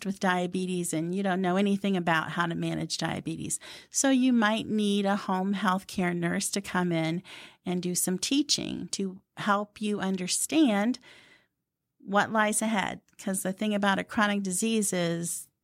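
No technical fault can be heard anywhere in this speech recording.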